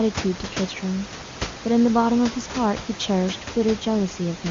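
No technical faults can be heard in this recording. A room noise sits about 10 dB below the speech, and the audio carries the band-limited character of AMR wideband (HD Voice) coding at a high rate, with the speech coming across clear.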